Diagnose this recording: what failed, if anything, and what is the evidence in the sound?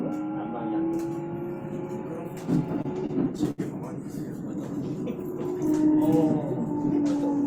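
Repeated stalls (stutter) from 2.75 to 3.60 s point to the network and jitter buffer: packets arrived late, the buffer ran dry ten times, and the receiver stretched the last sound across about 185 ms of gaps, the longest 70 ms, so the audio drags without losing content.

A jitter buffer slow-down at 5.57 to 5.97 s shows the receiver rebuilding its reserve. It repeated single pitch periods or bits of pauses to add about 38 ms, so that stretch plays at 92% speed with unchanged pitch and sounds slightly drawn out.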